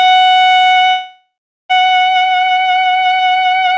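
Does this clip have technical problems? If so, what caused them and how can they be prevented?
Yes. A call audio freeze runs from 0.90 to 1.72 s. The music stalls into a fading buzz, then about 0.4 s of silence, and resumes where it stopped, now about 0.8 s late. A spectrogram shows smeared, decaying bands, then blankness. The waveform shows a tapering tail, then a flat line. The likely cause is packets delayed in transit, which emptied the jitter buffer. A larger adaptive jitter buffer on a steadier network connection would prevent it.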